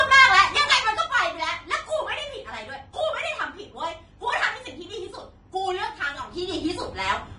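Speech clip whose treble is grainy and hissy throughout, with nothing above 10.5 kHz, most likely from Vorbis compression at a low rate, near 30 kbps. Unlike steady background hiss, this plainly audible grain rises and falls with the speech itself. From 0.34 to 1.12 s the level drops by roughly 10 dB, and from 5.95 to 6.67 s it rises by roughly 10 dB. Both changes happen in 2 dB steps at about seven per second. This is zipper noise, heard as a regular ticking during the level changes, not a smooth fade.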